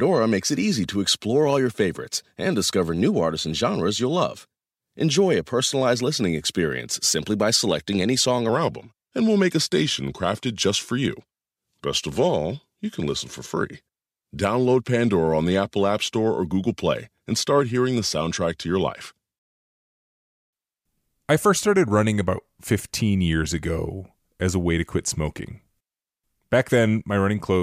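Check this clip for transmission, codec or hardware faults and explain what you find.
One fault is audible. Wrong sample rate, from 8.49 s to the end, just after "by selecting any song": the speech is played slower than it was captured, without conversion, so it runs at 0.919 times normal speed and drops 1.47 semitones, sounding low and sluggish. That ratio fits 48 kHz audio played at 44.1 kHz.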